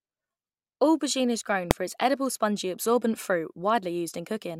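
At 1.71 s, between "is grown" and "for its edible spongy", there is a single loud bang. This is invalid numbers at full scale. A calculation produced infinite or invalid values, which were pinned to the maximum level for a block lasting about 0.73 ms, which fits a 32-sample buffer. That is too brief to hear separate pops.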